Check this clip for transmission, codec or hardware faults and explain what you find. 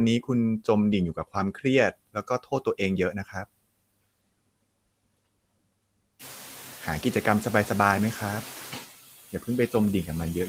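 The background noise drops away between phrases and comes back underneath the speech across the whole clip, and two short stretches of speech are turned down along with it.

Noise suppressor artifacts run from start to finish. The background sinks by about 19 dB whenever speech stops and rises again under each phrase, so the noise floor pumps with the speech. A noise suppressor causes this by estimating the steady noise in each frequency band and lowering those bands frame by frame. From around 6 s the room noise itself gets about 20 dB louder, sitting about 14 dB below the speech.

Speech cut by the noise suppressor occurs twice. Between 2.13 and 2.8 s, scattered pieces adding up to roughly 0.15 s are pulled down by up to about 19 dB, so they sound swallowed and faint. From 3.12 to 3.35 s a shorter dip of about 10 dB, around a tenth of a second in all, makes the sound briefly recede. Here the suppressor mistook quiet, noise-like parts of the speech for background and attenuated them with it.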